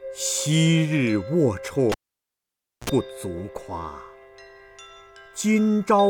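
The audio has a cable pulled and plugged in, from 1.92 to 2.90 s. A pop starts it. Near silence follows for 928 ms while the lead is out. Then comes a 55 ms burst of 60 Hz mains buzz as only the tip touches. A second pop marks the signal's return.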